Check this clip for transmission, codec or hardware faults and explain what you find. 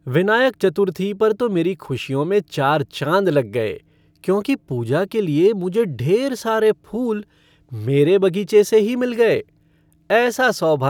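No transmission, codec or hardware faults.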